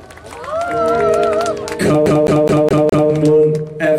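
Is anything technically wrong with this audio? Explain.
Yes. From 2.06 to 3.10 s the audio gets a CD stuck on one turn: a scratch keeps throwing the laser back a track, so the same 0.21 s segment repeats five times, each jump briefly muted. The result is a quick, even stutter. A spectrogram shows five identical blocks separated by thin silent gaps.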